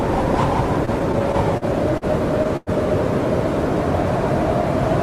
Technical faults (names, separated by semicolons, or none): repeated stalls (stutter); call audio freeze